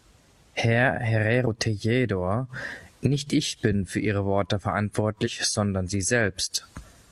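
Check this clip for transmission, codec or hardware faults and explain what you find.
Two faults appear, both from damaged data in a compressed stream. From 1.43 to 1.47 s and again from 5.23 to 5.28 s, the speech breaks briefly as corrupted bytes make the decoder misread frames and lose sync.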